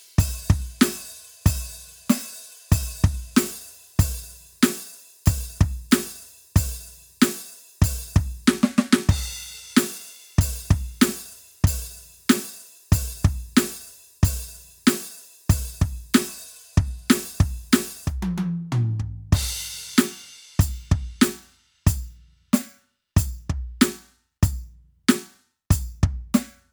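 Listening to this music, nothing stood out as a technical fault at any point.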